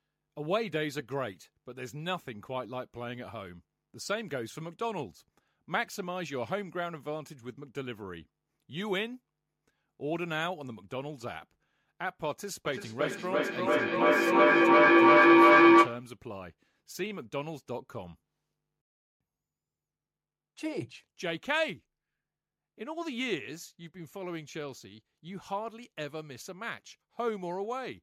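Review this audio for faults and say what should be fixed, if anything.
A low tone swells from 12.65 to 16.14 s, peaking about 15 dB above the speech and pulsing roughly every 300 ms. This is feedback howl: two devices in one room form a microphone-to-loudspeaker loop that gains level each trip, narrowing to around 300 Hz. To prevent it, keep only one device's audio active per room, or have participants use headphones.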